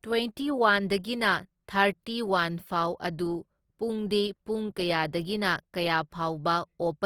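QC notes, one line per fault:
Throughout, Opus compression: the speech sounds grainy and rough, with noisy texture in place of clean harmonics, yet the top end reaches about 20.3 kHz. This likely comes from music-mode Opus at a low rate, around 24 kbps, filling starved bands with folded or noise content.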